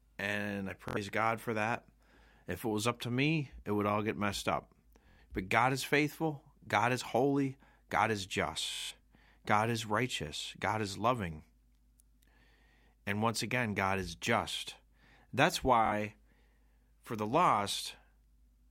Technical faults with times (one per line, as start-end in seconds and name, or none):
0.88-0.97 Bluetooth stutter
5.09-5.19 Bluetooth stutter
8.73-8.91 Bluetooth stutter
15.86-15.92 Bluetooth stutter